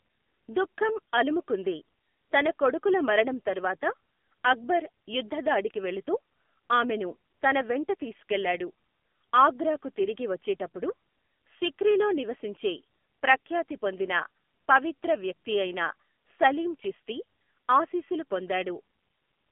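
The speech passed through an AMR narrowband mobile codec at a low rate, likely the 7.4 kbps mode, leaving nothing above 3.6 kHz and a plainly buzzy, synthetic tone throughout.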